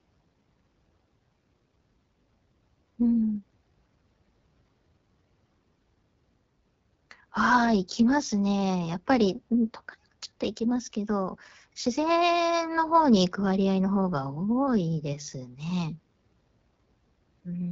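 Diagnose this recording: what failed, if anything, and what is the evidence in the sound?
The fault is in the codec stage. The AMR wideband (HD Voice) codec runs for the whole clip. Its damage is plainly audible. The speech sounds rough and raspy throughout. Nothing is present above 7.6 kHz. The codec models the vocal tract and drives it with sparse pulses up to 6.4 kHz, then fills the band above with shaped noise. That raspiness points to one of its lowest modes, which fits a rate near 8.85 kbit/s.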